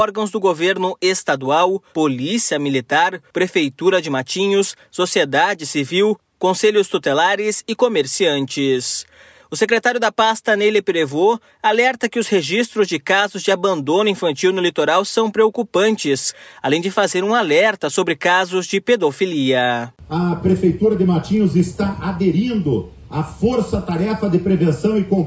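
Nothing here goes wrong, and the only thing of note is the ordinary call microphone processing, which trims the deepest bass and leaves nothing above 8 kHz, just as a call line should.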